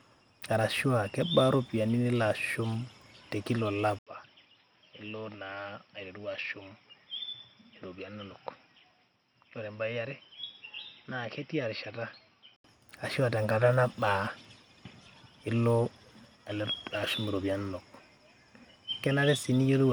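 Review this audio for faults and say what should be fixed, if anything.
From 3.99 to 12.64 s, after an 80 ms gap, the speech turns boxy and quieter, with nothing above 5.7 kHz, likely because the input switched to a poorer device. Pin the recording input to one microphone so the system can't swap devices mid-take.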